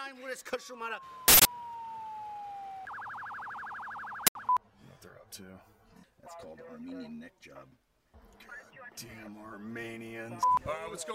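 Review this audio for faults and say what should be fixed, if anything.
Two uninitialised buffer bursts occur, at 1.28 to 1.45 s (171 ms) and 4.27 to 4.35 s (85 ms). Their lengths fit 8192-sample and 4096-sample blocks at 48 kHz. Each block was played before audio was written into it, so stale memory came out as loud digital noise. A dropout leaves silence, but these gaps are filled with harsh noise that starts and stops exactly on block boundaries. To fix this, zero each buffer on allocation and only hand it to playback once it has been filled.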